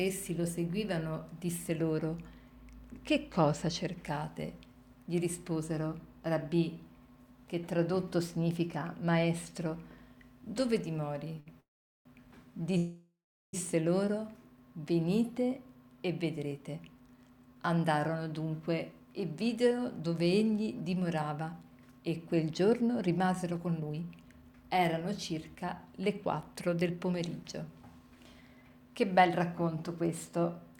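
At 11.40 s the sound hangs for about 62 ms with a slight buzz or dip before carrying on from the same point. This is a short stall from a late packet: the jitter buffer ran dry, and the receiver stretched the last bit of audio until the packet arrived, so nothing is lost. Two longer call audio freezes follow, from 11.60 to 12.07 s and from 12.77 to 13.55 s. In each, the sound smears into a fading buzz or hiss and then drops out, for about 0.41 s in the first and about 0.37 s in the second, before resuming exactly where it stopped. The first freeze adds roughly 0.45 s of delay and the second roughly 0.76 s. The likely cause is packets being held up in transit long enough to empty the buffer, with the receiver's fill decaying to silence while it waited. Later the audio sounds hurried but keeps its pitch. From 16.24 to 26.10 s it runs at 110% speed, from 26.53 to 28.70 s at 109%, and from 29.19 to 30.09 s at 108%. 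This is jitter buffer speed-up: with too much audio queued after the delays, the receiver kept cutting out tiny pitch-period slices to catch up. It trims around a second in the first stretch, a fifth of a second in the second, and well under a tenth in the last.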